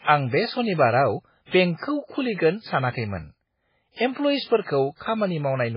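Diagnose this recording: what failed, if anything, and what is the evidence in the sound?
The speech is thin and watery from start to finish, with nothing above about 5.3 kHz and a swirly, chirpy texture on s sounds. That's heavy MP3 compression at the codec stage, likely a very low bitrate around 16 kbps, cutting treble and dropping weak frequency lines.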